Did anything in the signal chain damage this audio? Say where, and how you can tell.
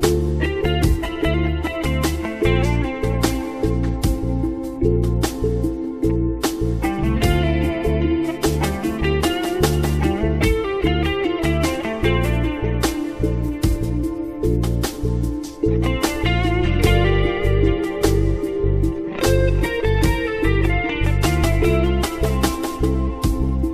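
No, nothing along the signal chain has left an audible mark on this audio, and the signal holds steady and continuous throughout.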